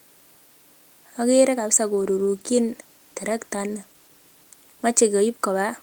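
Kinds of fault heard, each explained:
Call bitrate drop: the call's bandwidth estimate fell and the encoder was forced to spend far fewer bits, so the speech is coded more coarsely. From 1.96 s to 5.35 s the sound turns rough and watery. It is worst for about 2.3 s within that span, which fits a fall from around 32 kbps to around 18 kbps. Clarity returns as the rate recovers.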